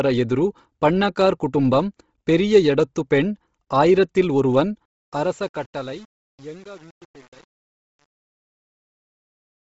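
From the start, the speech has that breathy, grainy edge and nothing above about 7.7 kHz, so it's likely Bluetooth LC3 compression, hit hard. The sound fits a low bitrate near 24 kbps with 7.5 ms frames, where the codec blanks out much of the top band and pads it with noise.

Then, right after "ಎಡತ್ತು ಪೆಣ್ ಆಯಿರತಿಲ್ ಒರುವನ್", at 4.85 s, the fade-out starts, and it has truncation distortion all the way to the end at 9.67 s. The stage seems to keep only about 7 bits with no dither, so as the level drops the waveform collapses into coarse steps. From about 4.91 s it gets gritty.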